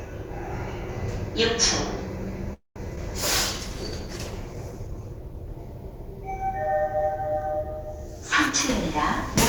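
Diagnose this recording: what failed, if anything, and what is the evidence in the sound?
Network stage, call audio freeze. From 2.53 to 2.78 s the sound stretches into a fading buzz or hiss, then about 150 ms of silence. It resumes where it stopped, with nothing skipped. Packets were likely held up and the jitter buffer ran dry, adding about 224 ms of delay.

Network stage, short concealed packet loss. At 2.96 to 2.99 s there is a brief smear. About 40 ms of audio never arrives. The receiver extends the previous sound for only about 9 ms, then blends back in, so the delay shrinks by roughly 30 ms.

Codec stage, driven by the network: a call bitrate drop. From 3.19 to 5.65 s the sound turns coarse and muffled, with the top end cut away. The bandwidth estimate fell, and the rate heard fits a fall from 96 to 17 kbps. The lowest rate lasts about 2.37 s.

Buffer stage, a jitter buffer speed-up. 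From 8.46 to 9.29 s the sound runs about 9% fast at unchanged pitch. The buffer held excess audio. To cut delay, it trimmed pitch-period slices repeatedly, removing roughly a tenth of a second.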